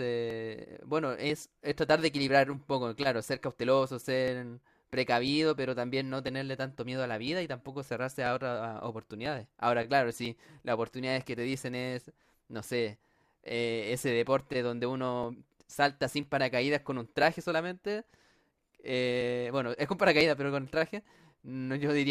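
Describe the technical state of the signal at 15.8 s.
At 15.8 s, periodic USB or driver dropouts are running, from 0.30 to 21.20 s. Every 1.00 s, a few milliseconds are skipped, giving regular ticks within the speech.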